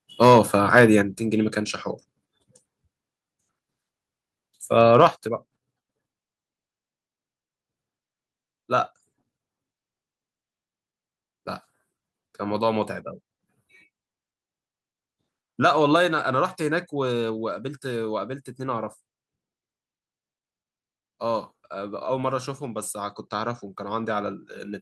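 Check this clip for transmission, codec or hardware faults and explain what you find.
Two hardware-side faults turn up in the speech, both on the microphone input.

Microphone overload occurs from 0.22 to 0.39 s and from 4.81 to 5.07 s. The input was likely set too hot, pushing peaks about 4 dB and about 2 dB past the converter's limit. The tops get flattened. The first burst clips a fair share of samples and sounds harsh and crackly. The second clips only a small fraction and is milder.

The microphone volume steps down at 1.02, 5.1 and 15.96 s. Each time, the level drops abruptly, by about 5, 6 and 3 dB. The voice and the background fall together. This is likely the call software reacting to the loud, distorted peaks by cutting the device's input gain in one step. The first two drops come right after the overloads.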